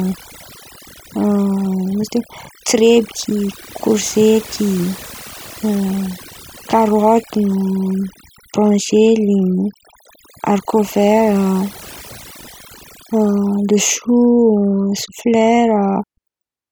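Across the whole speech clip, overdone noise removal strips the background to near silence dotted with twinkling specks. Bands near the noise estimate were pushed down too hard, so a spectrogram shows isolated bright dots scattered over dark, emptied regions.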